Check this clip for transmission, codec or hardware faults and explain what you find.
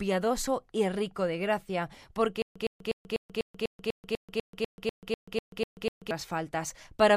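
There is one fault: a stutter with silent gaps from 2.42 s to 6.11 s. A 111 ms fragment repeats 15 times, each followed by 136 ms of dead silence, giving an even 247 ms cycle. This is likely a stalled player or stream replaying its last buffer on each retry. The true silences and exact repeats set it apart from random dropouts or a gapless loop, and the audio for that span is lost.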